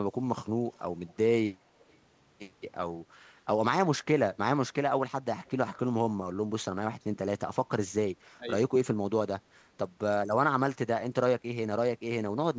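Echo leak appears at 0.72 to 0.82 s, 1.79 to 1.98 s and 5.46 to 5.5 s: brief, very faint scraps of the speech return about 354 ms late, far below the direct sound. The likely cause is a far-end loudspeaker whose echo canceller let residual pickup slip back.

Speech suppressed in double talk occurs at 8.34 to 8.47 s, where the speech sinks sharply, around 20 dB at its deepest, for roughly a sixth of a second. This is likely an echo canceller mistaking overlapping talk for echo and attenuating both.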